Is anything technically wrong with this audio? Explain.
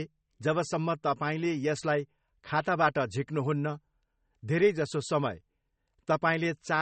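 Yes. Throughout the speech there is plainly audible MP3 compression damage, likely from a low-bitrate MP3 encode, which fits roughly 32 kbps. The treble stops abruptly at 8.4 kHz, and weak frequency components flicker in and out between frames, giving a watery, swirly texture with metallic chirps on s sounds and smeared consonant attacks. A plain low-pass filter would remove the top end just as cleanly but would leave the remaining sound steady, without that shifting, bubbling quality.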